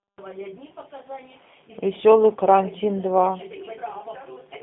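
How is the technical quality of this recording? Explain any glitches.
Technical quality is limited by one fault running through the whole recording: G.729 codec damage. The speech sounds plainly rough, buzzy and slightly synthetic, and thin, confined to roughly 200 Hz to 3.6 kHz with nothing above 3.7 kHz. That points to G.729A at what sounds like 8 kbit/s, rebuilding each 10 ms frame from a vocal tract filter, a pitch predictor and a few pulses rather than the real waveform.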